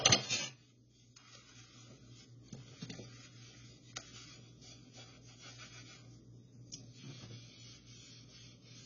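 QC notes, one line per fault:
Throughout, AAC compression: the audio is dull and smeared, with nothing above 7 kHz and a warbling, fizzy texture on sustained and noisy parts. The likely cause is heavy AAC-LC coding at a low rate, which fits a bitrate around 16 kbps. With so few bits, the encoder drops the top band and quantises what remains coarsely against its hearing model, leaving spectral holes and swirling artefacts that shift from frame to frame.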